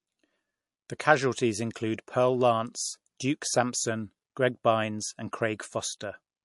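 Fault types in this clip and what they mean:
MP3 compression: an MP3 encoder likely ran short of bits, which fits a rate near 48 kbps. It cut the treble above 11.3 kHz and dropped weak detail frame by frame, leaving the speech dull and watery with plainly audible damage.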